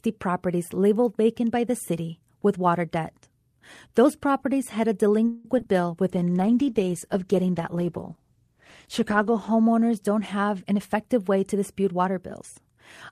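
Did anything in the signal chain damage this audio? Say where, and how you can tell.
Yes. Call audio freeze, 5.27 to 5.47 s: the speech stalls and the last sound is stretched into a fading buzz for about 172 ms, then resumes where it left off. That points to delayed packets likely draining the jitter buffer at the network stage.

Short concealed packet loss, 5.59 to 5.62 s and 5.64 to 5.66 s: two brief smears, each covering 20 ms of missing audio. The decoder bridged each hole by extending the preceding sound, then crossfaded back into the real audio.

Call bitrate drop, 6.07 to 11.29 s: the speech turns rough and muffled as the Opus encoder falls from 64 to 14 kbps, staying at the lowest rate for about 3.2 s. Fewer bits mean coarser coding and trimmed high frequencies at this codec stage.

Jitter buffer speed-up, 10.65 to 12.17 s: the speech runs about 9% fast at unchanged pitch. Receiver processing cut roughly 150 ms in small pitch-period slices to shrink an overfull buffer, which makes the delivery sound hurried.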